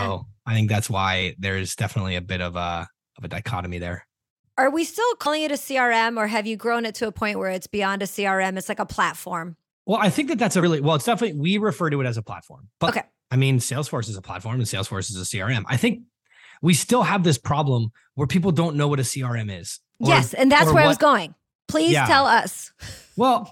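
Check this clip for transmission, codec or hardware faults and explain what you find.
There's one problem here, compressed frames skipped, at 5.25, 10.61 and 12.87 s in the speech. Each time a short stretch of audio just isn't played: roughly a tenth of a second at 5.25 s, a bit less at 10.61 s, and about a fifth of a second at 12.87 s. The jumps fit whole frames of around 23 ms going missing or being rejected by the decoder.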